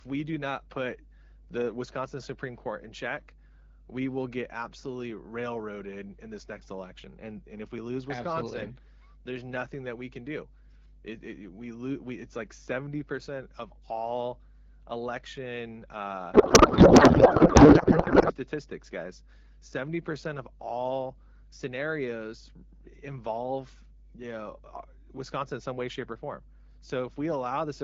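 A steady 50 Hz mains hum runs through the whole speech recording, sitting roughly 15 dB below the speech. A ground loop or nearby transformer is feeding power-line energy into the signal. Its fixed pitch and low harmonics set it apart from broadband rumble, which wanders in frequency.

From 16.33 to 18.36 s, the speech gives way to garbled noise and warble that barely tracks it. This is a codec payload misread. The decoder is reading the AMR-WB frame fields from the wrong bit positions, which points to octet-aligned frames being unpacked as bandwidth-efficient. Unlike packet loss, there are no gaps or concealment fades. The sound stays continuous but scrambled, then snaps straight back to the clear 12.65 kbit/s AMR-WB speech once the packing agrees again.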